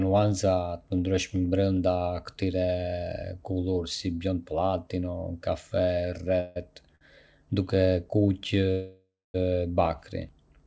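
Speech heard through a call link whose sound stops at 8 kHz, which fits a G.722 codec, carries two call audio freezes. At 6.40 to 6.58 s the last sound hangs on as a fading buzz or hiss for about 0.16 s, and at 8.71 to 9.36 s it fades further, into roughly 0.24 s of silence within a 0.63 s hold. The likely cause is packets held up in transit until the jitter buffer emptied. Speech then resumes from the same point, so nothing is lost, which sets these apart from dropouts that cut material away. At 6.96 s there is a short stall from a late packet. One sound is stretched by about 50 ms with a slight buzz or dip while the receiver waits for a single overdue packet. It is far briefer than the freezes and never fades toward silence.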